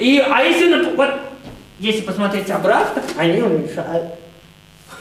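Throughout the clip, sharp switching spikes leak into the signal twice in every 50 Hz mains cycle, stacking harmonics up into the kilohertz range. The result is mains buzz, a steady, raspy drone sitting roughly 30 dB below the sound.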